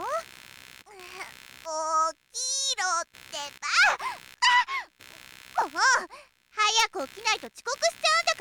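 Computer activity noise runs through the whole clip: a buzzing, chirping layer pulsing at around 70 per second, sitting roughly 25 dB below the sound. Processor or mouse load shifts the shared ground feeding the audio circuit, so the noise tracks computer activity rather than the sound.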